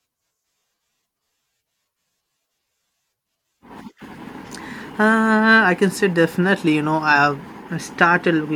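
No technical faults can be heard in this recording.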